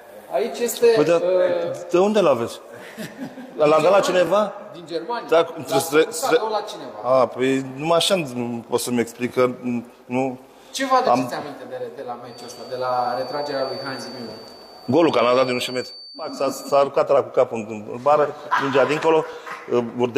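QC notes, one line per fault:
4.27–4.29, 9.29–9.31, 14.31–14.33 and 19.33–19.35 s: overlapping chunks. Each 5 s chunk restarts 20 ms early, replaying that slice as a regular click-stutter. The waveform shows a duplicated segment with a seam, and the spectrogram shows thin vertical broadband lines.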